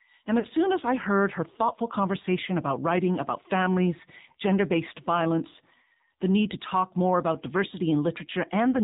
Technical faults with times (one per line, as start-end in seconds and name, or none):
0.00-8.83 AMR narrowband mobile codec
0.40-0.46 lost AMR speech frames